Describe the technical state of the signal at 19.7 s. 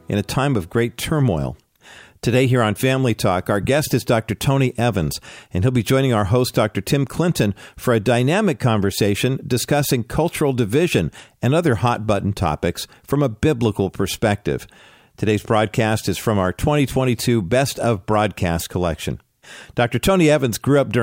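At 19.7 s the signal is intact, with no audible fault at that moment.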